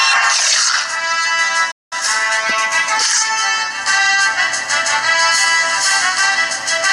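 At 1.71 s the sound cuts out abruptly and stays silent for about 0.2 s, until 1.93 s, then resumes. This is a playback stall, likely caused by the player running short of data or its thread being held up, leaving the output with nothing to play.

From 1.93 s to 2.71 s the audio runs hurried, at about 1.25 times normal speed, yet keeps its pitch. This is time-compressed catch-up: the player works off the backlog from the stall by dropping short slices and cross-fading across the joins.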